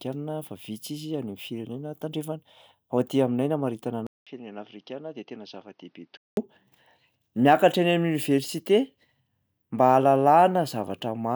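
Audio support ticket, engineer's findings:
Speech turns dull and narrowband 4.07–6.37 s. Nothing above 6.3 kHz. 200 ms gap at the switch. Level drops a few dB. Faint new noise floor appears. Likely input switched to a poorer device with a narrower capture band.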